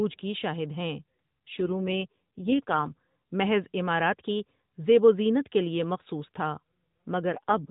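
From 1.58 to 2.94 s, after "کی شاہد ہیں", an AMR rate drop makes the speech rougher and buzzier, which fits 12.2 falling to 4.75 kbps. It recurs from 7.30 to 7.70 s.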